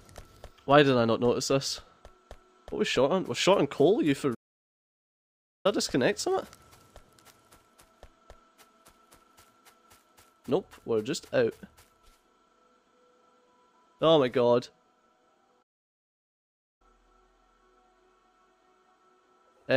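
The audio cuts out twice in mid-flow with a playback stall. The first silence runs from 4.34 to 5.66 s, about 1.3 s long. The second runs from 15.62 to 16.82 s, about 1.18 s long. Each gap is abrupt and far too long to be a natural pause. The likely cause is the player running short of buffered data, or its audio thread being blocked, so output stopped until it recovered.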